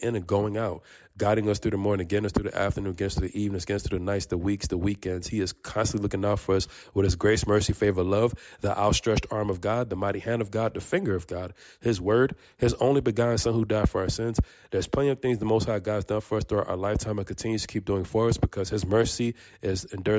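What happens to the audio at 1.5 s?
Nothing goes wrong at 1.5 s; the audio plays through that moment intact, with no dropout, click or other fault.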